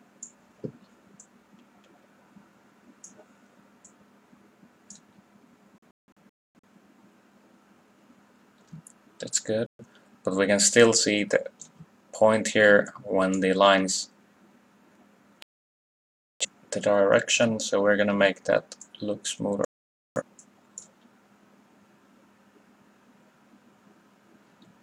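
Digital broadcast dropouts mute the sound at 5.78 to 6.67 s (several holes totalling 0.55 s, longest 0.26 s), 9.66 to 9.84 s, 15.42 to 16.45 s and 19.65 to 20.22 s, as the receiver lost good frames. Unlike a loose-connection crackle, each gap is clean silence, and the material sent meanwhile is missing.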